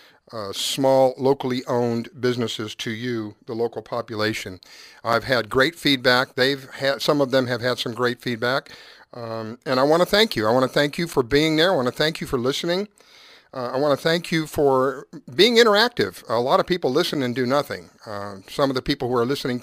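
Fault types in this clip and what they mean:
sample clock jitter: A fine hiss and roughness runs through the whole clip, sitting at about 30 dB below the signal and growing stronger wherever the sound is loud or bright, then fading away in quiet passages. The converter's clock wanders by a few microseconds, so each sample is taken slightly early or late. The resulting error scales with how steeply the waveform is changing, which is why fast, high-frequency material suffers most.
gap between chunks: At 5.13 s the sound drops out for about 7 ms, a tiny hole. Nothing is missing from the material itself. The stream was carried in pieces, and a brief stretch of silence was inserted at the join between two of them, which fits chunks about 6 s long. This is the only such break heard in the clip.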